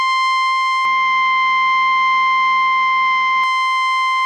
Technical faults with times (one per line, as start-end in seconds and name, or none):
0.85-3.44 input switched to a poorer device